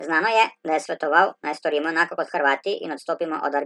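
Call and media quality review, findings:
Wrong sample rate, whole clip: speech high-pitched and hurried, about 1.38x speed, pitch up roughly 5.5 semitones. Probable playback or resampling stage. Samples clocked out faster than captured, no rate conversion; fits 32 kHz material played at 44.1 kHz.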